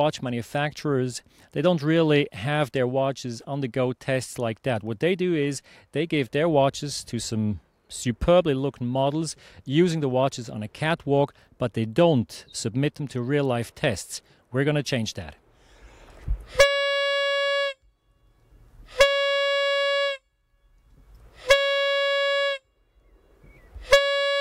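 Nothing in the recording stood out as a technical problem on listening.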